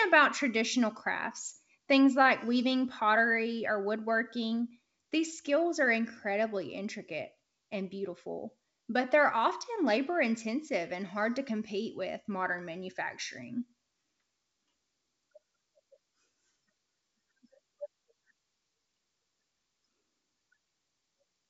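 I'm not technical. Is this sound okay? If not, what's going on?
Yes, no faults here.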